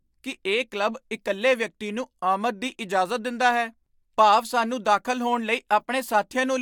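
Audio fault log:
Nothing to log on this speech recording, since no faults turned up anywhere in it.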